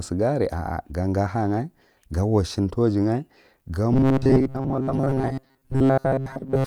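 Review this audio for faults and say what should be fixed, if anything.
Audio likely stopped arriving often enough from 3.93 s to the end at 6.66 s, so the software filled each gap by replaying its last short buffer, about 7.5 ms long, while the real audio was skipped. This robotic sound from repeated short buffers stamps a fixed 134 Hz buzz onto the speech, since the loop repeats 134 times a second. With most of the audio replaced, the voice becomes a rigid, metallic drone that only loosely tracks the words. Prevent it by enlarging the jitter or input buffer and making sure the audio thread is scheduled reliably enough that it never runs dry.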